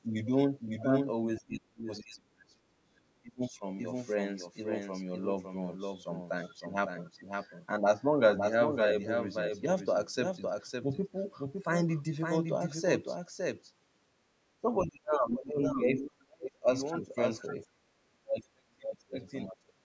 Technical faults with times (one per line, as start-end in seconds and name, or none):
0.00-19.84 doubled audio track
1.39-3.63 speech suppressed in double talk
14.61-16.68 speech suppressed in double talk
17.68-19.18 speech suppressed in double talk
19.47-19.81 speech suppressed in double talk